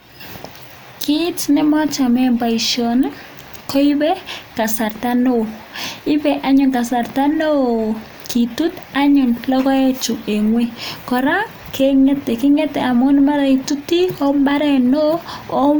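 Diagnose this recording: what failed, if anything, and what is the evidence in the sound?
Nothing has failed here; the speech comes across intact, with no stage of the chain leaving a mark you can hear.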